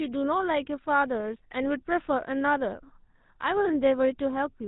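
From start to finish, the speech carries the damage of the GSM full-rate codec at 13 kbps. The voice is rebuilt from a vocal-tract model fed by sparse regular pulses, so it sounds buzzy and gravelly. A spectrogram shows nothing above 4 kHz and coarse, smeared harmonics.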